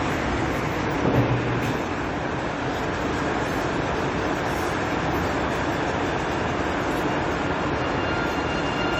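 Generation loss runs through the whole clip. The sound is swirly and smeared, with a hollow quality. Attacks lose their edge and blur. Nothing is heard above 20 kHz. The damage is heavier than a single encode at a moderate rate would leave. It likely comes from about seven rounds of lossy re-encoding, in a way that fits AAC-LC near 96 kbit/s. Each pass quantised again on a shifted frame grid. Noise and spectral holes piled up.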